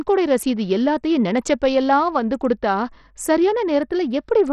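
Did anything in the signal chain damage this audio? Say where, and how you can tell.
Yes, at the codec stage, across the whole speech clip: the treble flickers and thins, gritty noise clings to the sound, and a spectrogram shows a hard ceiling near 14.6 kHz with patchy, blocky upper bands. This is likely Bluetooth SBC compression on a starved bit pool, which fits roughly 64 kbps.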